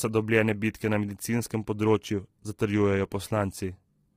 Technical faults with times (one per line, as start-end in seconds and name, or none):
0.00-4.16 low-delay AAC compression